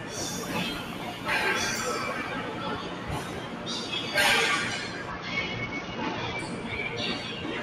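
Across the whole clip, a speech-tuned noise suppressor applied to these everyday sounds dips sustained tones and tails by about 5 dB, so they pump; the waveform envelope breathes and spectrogram tails fade early. From 5.10 to 6.39 s, a Bluetooth SBC bit pool drop dulls the treble and adds grit. The spectrogram's upper bands go blank, consistent with the bit pool falling from around 28 to 8, near 72 kbps.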